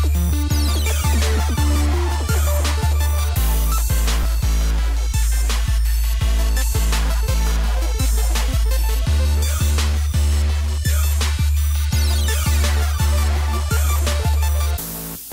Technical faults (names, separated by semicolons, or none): overlap between stream segments